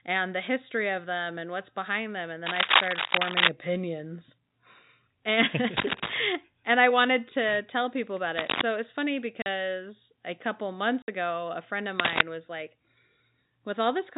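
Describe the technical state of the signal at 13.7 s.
At 13.7 s the speech is intact, carried over normal G.711 telephone coding that holds it below 4 kHz with only a faint level-following hiss.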